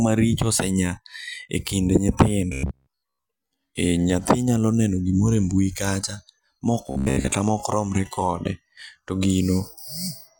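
From 2.53 to 3.26 s, before "e nyathi nyalo neno", and 6.87 to 7.32 s, before "mokromre kode to", speech becomes a metallic 66.8 Hz buzz: robotic sound from repeated short buffers, likely a 15 ms chunk looped while most real audio is skipped. Spectrograms show rigid harmonic stripes, and the waveforms show identical repeating cycles.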